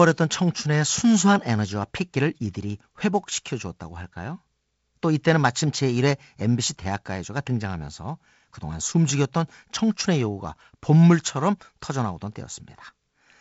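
Speech clip with no technical faults, carried over G.722 wideband telephone coding whose band limit leaves nothing above about 7.7 kHz, consistent with the codec's wideband ceiling.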